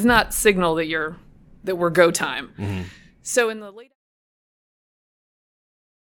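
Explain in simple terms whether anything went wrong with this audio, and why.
Nothing went wrong with this speech recording; the sound just eases away in a gentle fade-out from around 2.5 s to 3.96 s, the sort of smooth ending an editor would add, with no click or sudden cut.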